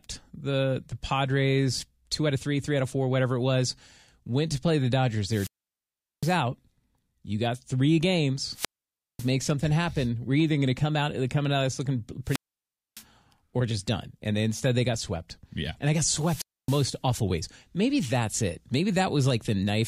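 Speech recorded through a wireless link shows four wireless microphone squelch dropouts, at 5.26–6.40 s, 8.51–9.31 s, 12.24–13.04 s and 16.08–16.97 s. In each, the RF signal fades, hiss swells briefly, and the receiver's squelch gates the output to near silence for about 760, 550, 610 and 270 ms respectively before the carrier recovers and the speech returns.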